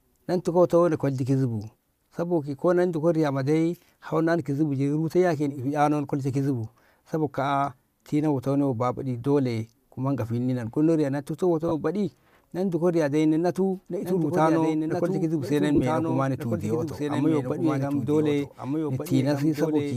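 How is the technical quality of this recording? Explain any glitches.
The recording has two brief dropouts and a delayed second copy of the speech during its final seconds.

Lost LE Audio frames, at 11.68 to 11.72 s and 15.75 to 15.82 s: the sound briefly smears into noise as the LC3 decoder fills the gaps with randomised repeats of the last spectrum. The first gap is about 30 ms, which fits four 7.5 ms frames. The second is 37.5 ms of losses scattered over about 60 ms, with the longest run around 20 ms.

Doubled audio track, from 14.02 s to the end: an echo-like, full-band copy of the speech trails about a second and a half behind, roughly 5 dB quieter, with no room colour. It likely comes from a second, slower capture path mixed in alongside the original. The light grain of what is likely Bluetooth LC3 compression can be heard throughout.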